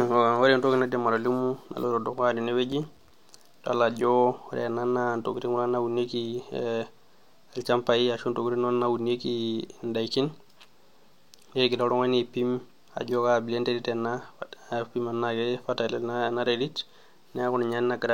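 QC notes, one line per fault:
2.72–3.10 s processor overload crackle, after "naidim atolimu naloito dukuya": about ten silent gaps from missed, roughly 5 ms buffers make gritty tearing, not one clean dropout.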